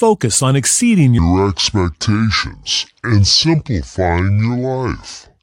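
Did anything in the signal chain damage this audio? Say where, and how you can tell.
Yes. From 1.19 s, right after "on exceeding", to the end of the clip, the speech runs at about 0.64 times its recorded speed, so the section at the wrong speed sounds slowed and dragged, with the voice dropping roughly seven semitones. Pitch and tempo fall together at one instant, the signature of resampling against the wrong clock rather than a pitch effect. The likely stage is editing or playback, where that segment was interpreted at a mismatched rate.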